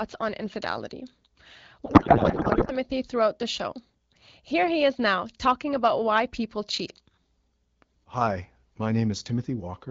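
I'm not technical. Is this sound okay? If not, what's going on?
No. From 1.85 to 2.72 s, just before "throughout the show", there's a codec payload misread: the two ends disagreed on how the phone data was packed, so the speech turns into garbled, warbling noise. Unlike a dropout, the sound doesn't go silent.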